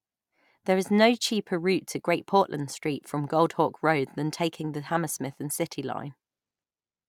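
No technical faults can be heard anywhere in this speech recording.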